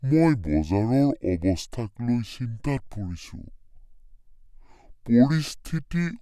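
From start to finish the speech runs slow and low: a wrong sample rate, with samples played back unconverted at about two thirds speed, 0.667 times, pitched down roughly 7 semitones, which fits 48 kHz audio played at 32 kHz. A spectrogram shows every band shifted down proportionally; the waveform appears stretched in time.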